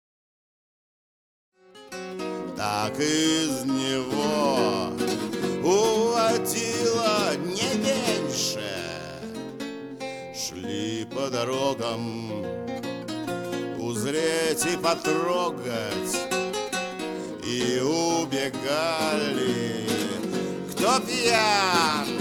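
No technical faults can be heard in this audio. The level rises in a smooth, click-free fade from roughly one and a half seconds and reaches full level at 2.66 s.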